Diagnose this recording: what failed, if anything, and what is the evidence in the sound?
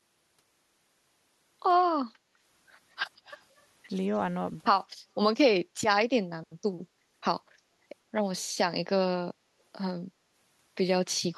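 Call processing is the culprit both times. The background gets gated by the echo canceller at 2.16 to 2.33 s, dropping about 7 dB, and again at 4.97 to 5.09 s, dropping about 8 dB. Each is a brief hole of roughly 150 ms and 100 ms respectively where the canceller clamps the mic while the far-end loudspeaker plays.

From 3.25 to 3.63 s there's a faint delayed copy of the speech, trailing by 174 ms and sitting roughly 30 dB down. That's likely an echo leak in the call processing, with the far side's canceller failing to fully subtract its loudspeaker pickup and sending the residue back.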